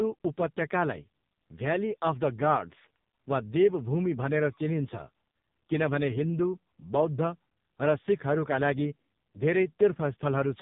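From start to finish the speech sounds buzzy, hollow and synthetic, as if heard down an old mobile phone, with nothing above 3.8 kHz. This is the AMR narrowband mobile codec (AMR-NB). It samples at 8 kHz and rebuilds the voice from a vocal-tract model fed by sparse pulses in 20 ms frames. The heavy damage points to one of its lowest modes, around 5 kbps, where the pulses are too coarse to carry natural detail.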